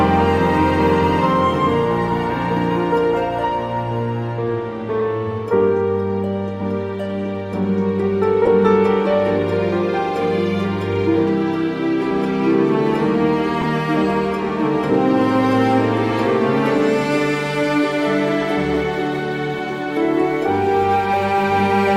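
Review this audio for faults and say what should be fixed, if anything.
Corrupt frame decoded at 5.00 s, 8.45–8.48 s, 13.61–13.66 s and 18.21–18.27 s. Each time, two or three bit-damaged compressed frames were decoded anyway, and the misread codes put energy at the wrong frequencies. Checking frame integrity before decoding and concealing frames that fail the check would prevent these bursts.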